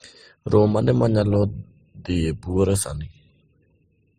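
Speech with a band-limited, smeared quality that runs throughout, nothing above 15.7 kHz, and two layers of coding artefacts heard together. This is likely transcoding between lossy codecs, and it fits MP3 at around 35 kbit/s re-encoded as Opus at around 32 kbit/s.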